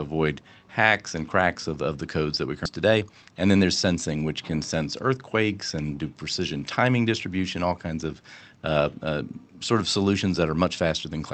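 Skip ahead at 2.65 to 2.67 s in this speech clip: right after "the codes that we", roughly 0.4 s of audio is dropped and nothing fills the gap. Audio lost on the way or discarded by an overflowing jitter buffer while later packets were already queued leaves out a chunk, so the two sides of the jump meet almost directly. Jitter buffer speed-up follows from 2.75 to 3.76 s, just before "sensing which can sense". Holding more audio than it targets, the buffer trims short pitch-period pieces repeatedly, about 0.15 s in total, so the speech runs at 112% speed with unchanged pitch and sounds hurried. Both faults sit on a call path whose Opus coding limits the top end to 8 kHz, which fits a bitrate around 32 kbps.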